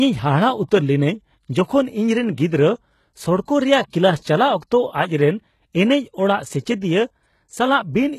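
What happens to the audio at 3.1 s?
At 3.1 s the speech carries the same heavy coding damage heard through the whole clip, most likely HE-AAC compression at a very low bitrate, around 16 kbps. The treble is rebuilt by copying lower bands upward rather than coded directly, so s sounds come out gritty, metallic and lispy. On a spectrogram, the upper region shows blocky, repeated patches of lower-band texture, and everything stops at a flat ceiling near 12.3 kHz.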